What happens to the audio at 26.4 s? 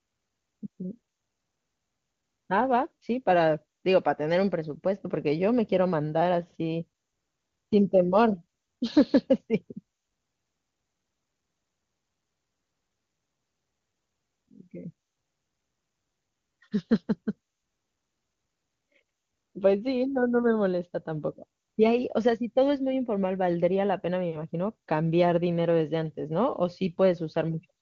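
At 26.4 s the speech is intact, carried through the AMR wideband (HD Voice) codec at 23.85 kbit/s, a rate high enough that any coding damage is faint at most.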